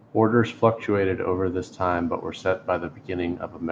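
No technical faults can be heard in this speech recording.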